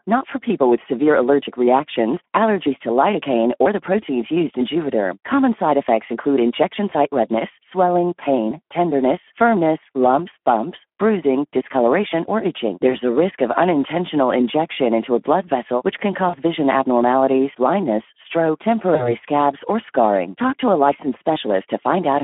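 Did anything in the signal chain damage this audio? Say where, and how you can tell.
Yes, at two stages. At the codec stage, the whole clip has been through the Speex codec at 11 kbps on a narrow 250 Hz to 3.4 kHz line. This low-rate CELP coding leaves too few bits for the excitation, so the speech sounds plainly hoarse and grainy throughout. On a spectrogram the energy stops sharply near 3.4 kHz, with little below 250 Hz. The harmonics look smeared and noisy rather than cleanly striated.

At the network stage, VoIP packet loss concealed by the speech codec shows up four times. The first is at 6.89 to 6.94 s, between "side effects include injection" and "redness swelling pain tenderness". The second is at 12.89 to 12.94 s, after "bruising discoloration or itching" and before "a risk". The third is at 16.29 to 16.36 s. The last is at 18.95 to 19.15 s, just before "scabs or scarring". The gaps sound like about 20 ms, 20 ms, 40 ms and 40 ms of missing audio, which fits one or two lost 20 ms frames each. 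The decoder filled each gap by repeating its last pitch and filter at falling gain, which stretches the preceding sound out as it fades. On a spectrogram it shows as a short stretch of frozen, fading energy, and the voice stays weak or distorted for a moment after speech resumes.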